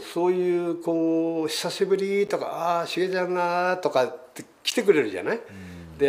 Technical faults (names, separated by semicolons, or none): corrupt frame decoded